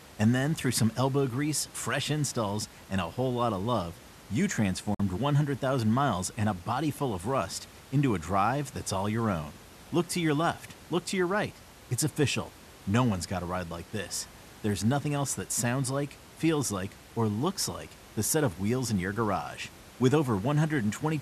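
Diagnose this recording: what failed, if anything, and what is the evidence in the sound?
A digital broadcast dropout hits the speech at 4.94 to 5.00 s. The audio fades out over about 3 ms and leaves a hole roughly 48 ms long, in which even the room noise, otherwise sitting about 22 dB below the speech, disappears. That full silence points to the receiving stage. Frames arrived corrupted or failed their checksum, and the decoder muted rather than play damaged data. A gap of this length fits two lost frames of about 24 ms each.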